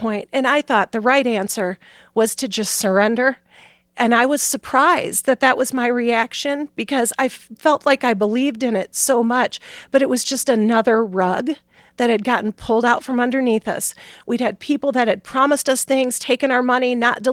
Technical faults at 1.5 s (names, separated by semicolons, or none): none